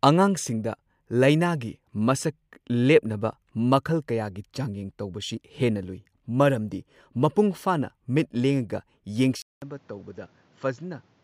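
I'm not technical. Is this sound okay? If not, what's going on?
No. At 9.42 s the speech goes quiet for a fifth of a second, then returns duller, a bit softer, with nothing above 7.6 kHz and a new background noise. That combination points to an input switched to a poorer device, rather than simple muffling.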